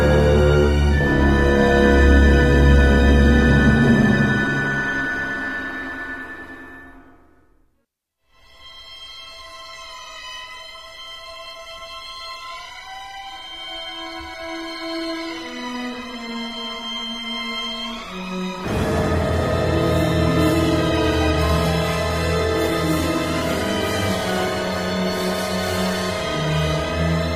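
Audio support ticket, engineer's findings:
No audible faults found on listening; nothing to report.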